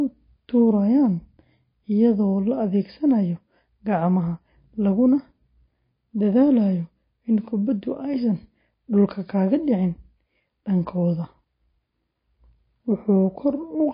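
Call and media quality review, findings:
Whole clip: speech dull and band-limited, nothing above 5 kHz. Watery, swirly texture, metallic chirp on s sounds, consonant onsets smeared. Likely MP3 compression, consistent with a 24 kbps encode. Starved of bits, the encoder drops treble at a fixed cut-off and zeroes weak spectral lines, which flicker on and off frame to frame.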